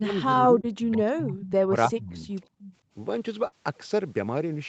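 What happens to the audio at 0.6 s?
At 0.6 s two faults overlap. The first is speech suppressed in double talk, running from the start to about 2.31 s. The echo canceller was likely unable to tell the near talker from the loudspeaker echo while both sides spoke, so it pulled the level down for roughly two seconds in total. At its deepest the drop reaches about 25 dB, and the speech sounds dipped, thinned and at times chopped into pieces.

Inside that stretch, from 0.61 to 0.65 s, is a short concealed packet loss. About 20 ms of the call did not reach the decoder in time, and the receiver filled the gap by extending the preceding sound before blending back into the real signal. What you hear is a brief smear or wobble layered over the already suppressed speech.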